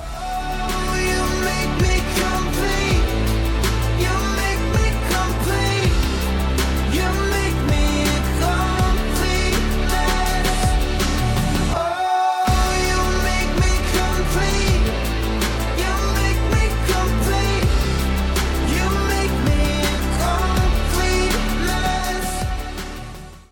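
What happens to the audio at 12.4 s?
Nothing goes wrong at 12.4 s; the audio carries on intact through that moment, with no dropout, click or distortion.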